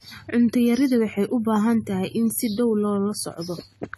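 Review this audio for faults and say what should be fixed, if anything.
Throughout the speech, the sound is dull and smeared, fizzy on sibilants, with nothing above 13.3 kHz. It is likely AAC compression, which fits AAC-LC near 32 kbps. Re-export from the original source at a higher bitrate or in a lossless format.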